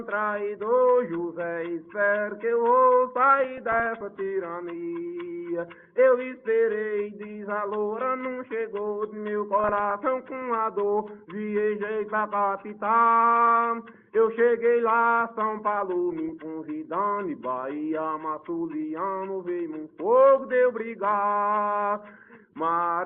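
DAB burbling at 3.57 to 4.01 s, 9.6 to 9.96 s and 16.12 to 16.29 s: weak reception let bit errors, well under a percent, past error correction into the MP2 data, so corrupted samples put short blips of noise into single sub-bands.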